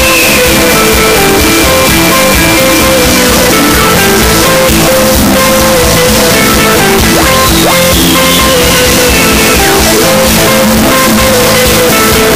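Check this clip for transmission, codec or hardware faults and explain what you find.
The whole clip, start to finish, is extremely loud and harsh, with the waveform pinned into a near-square shape at an almost fixed, high level. Quiet background noise comes through as loud as the main sound, though its pitch can still be followed. This is a float read as integer fault, likely caused by 32-bit float samples being interpreted as 32-bit integers, so each sample's sign and exponent bits, not its true amplitude, set the level.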